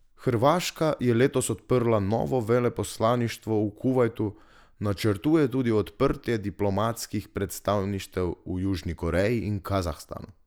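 No technical faults are audible.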